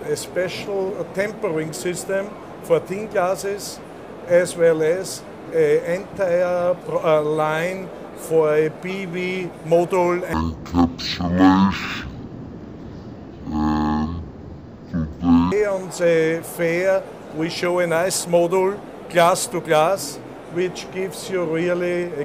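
From 10.33 s to 15.52 s the sound drops to half speed and falls a full octave, 12 semitones, which is the signature of stereo read as mono. The interleaved left and right samples are being taken in sequence as one channel, so each stereo frame yields two output samples and the material is stretched to twice its length. Alongside the slowed, lowered sound, a fainter mirrored copy sits in the upper half of the spectrum.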